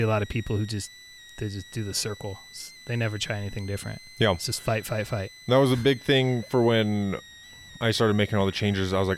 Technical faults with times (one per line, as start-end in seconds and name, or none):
0.00-9.18 switching supply whistle